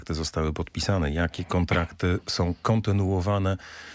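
Nothing stood out as a technical problem on listening to this audio.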